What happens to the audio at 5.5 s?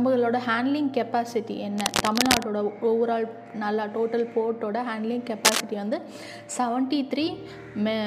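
Cable scratch noise runs from 5.45 to 5.61 s, a burst of about 0.16 s. The likely cause is a worn cable, connector or control being disturbed, so its contact resistance jumps around rapidly and injects dense, irregular bursts of noise into the signal. It is heard as a brief scratching, rustling texture laid over the sound, rising somewhat above the level of the sound itself before it stops.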